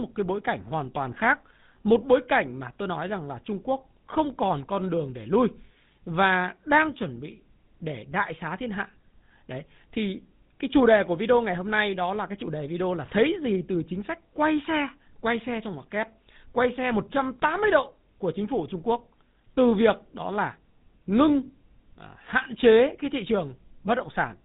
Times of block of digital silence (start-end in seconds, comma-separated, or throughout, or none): none